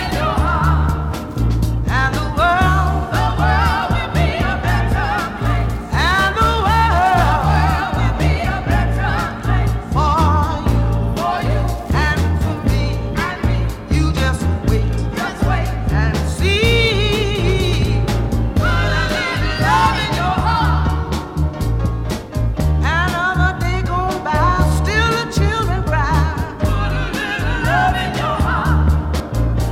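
At 29.2 s, just before the end, the audio jumps forward: compressed frames skipped. A short stretch, around 70 ms or roughly two frames, never reaches the output, which fits a codec with 32 ms frames. On a waveform the envelope shifts abruptly with no gap. A spectrogram shows a vertical discontinuity.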